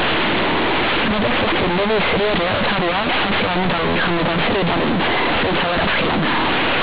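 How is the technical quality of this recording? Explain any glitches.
The recording is badly damaged by a single fault that runs through the whole clip.

Companded audio read as linear, throughout: the speech was stored as A-law telephone bytes, but they are played as plain linear 8-bit samples with no expansion. Every sign change swings the output across about half its range, so quiet passages come out as loud as speech, producing harsh, buzzy distortion and heavy noise in the pauses. Beneath this, the band stops at 4 kHz, which points to 8 kHz telephone coding.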